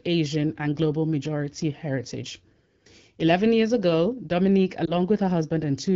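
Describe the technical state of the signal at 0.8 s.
At 0.8 s the signal is intact, with the speech carried cleanly through what sounds like an AMR wideband (HD Voice) path.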